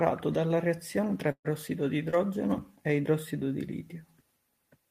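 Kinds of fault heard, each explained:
Burst of packet loss: at 1.31 to 1.46 s about 140 ms of audio was lost; the last sound is stretched and faded over 131 ms, with 70 ms of silence.
Short concealed packet loss: at 2.10 to 2.14 s a 20 ms hole is patched by continuing the preceding sound, then blending back, heard as a brief smear.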